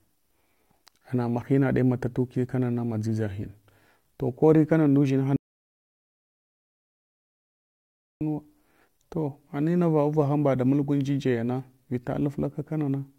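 At 5.36 s the speech cuts off abruptly into dead silence, with no room tone at all, and resumes mid-flow at 8.21 s; about 2.85 s is simply missing. This audio dropout to silence likely came from the input being lost while zeros kept being written.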